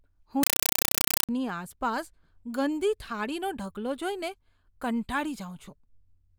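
From 0.43 to 1.29 s the speech is replaced by a compressed stream played as audio. An AC-3 bitstream was passed on as if it were ordinary samples, with no decoding. Each coded frame comes out as a 5.33 ms burst of noise, then silence from the padding. The bursts repeat 31.25 times a second. The density fits a 256 kbps stream. It sounds like loud, chattering static. Speech returns with "આસપાસ ગંદી થાળીઓ".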